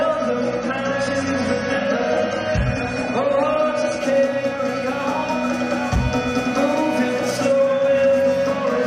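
From 0.0 to 4.0 s, an adaptive stream starting at a low bitrate cuts everything above 11.1 kHz and adds codec artefacts, then quality jumps gaplessly.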